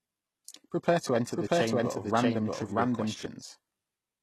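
Throughout the clip, the speech carries plainly audible codec damage, likely from HE-AAC compression at a rate around 16 kbps. Its synthetic treble stops near 12.3 kHz and is rebuilt from lower bands, so the upper harmonics do not line up, unlike the simple dulled top of a low-pass filter.

Just after "to enter", from 1.36 to 3.26 s, a doubled audio track appears, likely a second copy of the same audio mixed in out of step. The copy runs roughly 0.7 s behind at about equal level. It is full-band and dry, with no decay or room colour, and it begins and ends abruptly, which separates it from an echo or reverb tail.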